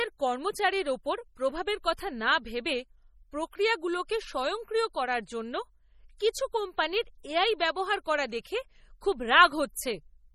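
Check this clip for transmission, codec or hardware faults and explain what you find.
Two codec faults are audible: heavy compression damage across the whole clip, and one pre-echo on an attack.

MP3 compression runs throughout the speech. The encoder appears to have been starved of bits, which fits a low bitrate of about 32 kbps, and that starvation is the likely cause of the watery, swirly texture and the metallic edge on s sounds. Nothing survives above 16.2 kHz. On a spectrogram that shows as a hard ceiling, with patchy, flickering holes below it where weak lines drop in and out.

Pre-echo occurs at 8.43 s, just after "এআই ব্যবহার করা". The transform block spreads its quantisation noise evenly across its length, so noise sized for the loud attack also fills the quiet moment before it. You hear a short hiss of about 16 ms leading into the onset, which sounds softened. In the waveform, low-level fuzz sits ahead of the transient. 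On a spectrogram, a broadband smear sits just before it.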